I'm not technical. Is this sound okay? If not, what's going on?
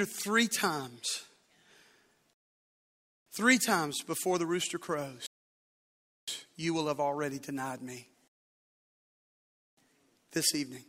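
No. The speech goes silent three times, then picks up exactly where it stopped. These are rebuffering stalls: the player ran out of downloaded audio and waited for more. They happen from 2.33 to 3.26 s, just before "three times before the"; from 5.26 to 6.28 s, between "times before the rooster" and "you will have already"; and from 8.28 to 9.77 s, right after "have already denied me". Each adds about 0.9, 1.0 and 1.5 seconds of dead air, but no speech is lost.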